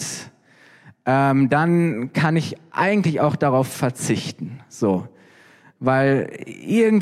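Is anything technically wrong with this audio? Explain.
No, nothing technically wrong can be heard in this speech clip.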